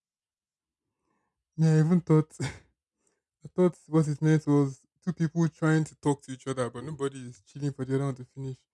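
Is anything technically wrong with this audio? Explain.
No, nothing in this recording stood out as technically wrong on listening.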